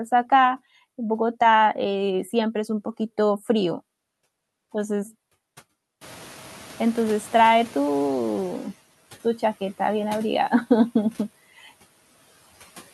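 Noise suppressor catching up, 6.01 to 8.68 s: the room noise behind the speech jumps by about 20 dB around 6 s, and the suppressor's noise estimate lags. The noise is briefly louder, then sinks by about 10 dB as the estimate adapts over 2.67 s.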